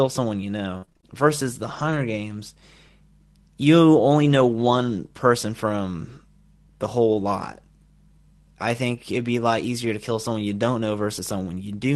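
From 0.77 to 1.97 s the speech turns choppy and robotic, with short holes up to 53 ms. This is repeated packet loss: the decoder stretched the last sound over roughly 150 ms of missing audio.

At 8.79 s, for 20 ms, the speech turns briefly rougher and noisier without any gap. This is a lost packet rebuilt from error correction: the decoder played the low-bitrate Opus copy carried in the next packet.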